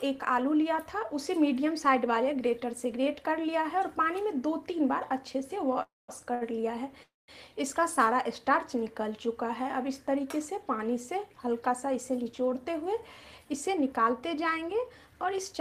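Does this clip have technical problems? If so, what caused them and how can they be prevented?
Yes. There are three kinds of fault, all from the receive side of a packet call.

Call audio freeze, at 5.82 to 6.10 s and again at 7.03 to 7.30 s. The sound stops moving on, the last moment is carried forward as a fading buzz or hiss, and then there are about 190 ms of silence before the audio resumes from the same point. About 260 ms and 250 ms are inserted, with nothing lost. The likely cause is packets held up in the network long enough to drain the jitter buffer completely. Prevention: reduce network congestion and burst delay on the path, and allow the jitter buffer a larger maximum depth.

Short stall from a late packet, at 6.34 to 6.43 s. One packet missed its playout time, so the receiver stretched the preceding sound by 66 ms. This is heard as a brief hold with a faint buzz or dip. Playback then continued without skipping anything, so the stall only adds delay. 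Coming between the two freezes, it points to the same unstable delivery. Prevention: give the jitter buffer a little more headroom over the measured jitter so a single late packet is absorbed.

Jitter buffer speed-up, at 12.10 to 12.93 s and 13.38 to 15.53 s. After the earlier delays, the buffer held more audio than its target. The receiver trimmed it by cutting short pitch-period pieces over and over. Playback runs at about 107% and then 106% with unchanged pitch. Around 70 ms and 150 ms are removed, and the sound comes across as hurried. Prevention: stabilise delivery so less excess builds up, and let the buffer shrink more gradually.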